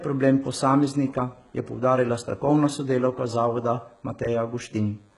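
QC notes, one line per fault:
Throughout, DECT cordless phone buzz: there's a thin, steady buzz sitting under the speech, well down at around 40 dB below it. It repeats at 100 Hz with a stack of harmonics, which is the signature of a DECT handset or base nearby firing a radio burst every 10 ms that the audio circuitry rectifies into the signal. It's constant, not tied to anything in the speech.
Throughout, HE-AAC compression: the treble has that synthetic brightness, with s sounds coming out gritty and a bit lispy, and nothing at all above 11.1 kHz. The damage is heavy. The likely cause is HE-AAC at a very low rate, and the sound fits something around 12 kbps. Only the lower band is really coded, and the top end is rebuilt by copying lower bands upward under a coarse envelope, so the harmonics don't line up across the crossover.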